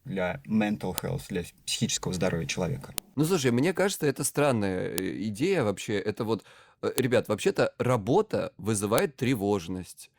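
Separate two-second pieces of this speech recording were joined without their WAV headers being stripped, so each header's few dozen bytes play as audio samples: a file header played as audio. The result is a sharp, loud click at every join, at 0.98 s just after "для mental", at 2.98 s after "для психического здоровья человека", and at 4.98, 6.98 and 8.98 s, arriving every 2 s regardless of the speech underneath.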